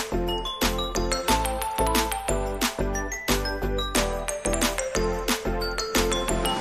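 Something is likely injecting a regular pulse into the signal path, such as interference from nearby equipment or a faulty connection or power supply. It produces a train of clicks from 5.38 to 6.55 s: about ten similar pops at 8.6 per second, peaking roughly as loud as the sound itself.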